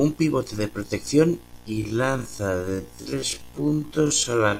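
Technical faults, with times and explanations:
1.6–4.6 s: time-stretched section. From 1.6 s the speech abruptly slows to about 0.51 times its pace while pitch stays unchanged, so it drags. This is likely software stretching that preserved pitch by repeating short slices to fill the added length.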